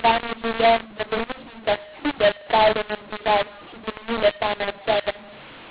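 Throughout, the speech sounds harsh and gritty, with pauses filled by hiss: a mu-law and A-law mix-up, with A-law telephone audio decoded as mu-law.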